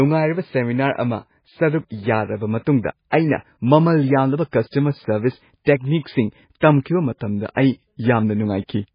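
Speech throughout sounds dull and watery, with a swirling, metallic edge on s sounds and nothing above 5 kHz. The likely cause is heavy MP3 compression at a very low bitrate, around 16 kbps, where the encoder cuts the treble and switches weak frequency lines on and off between frames.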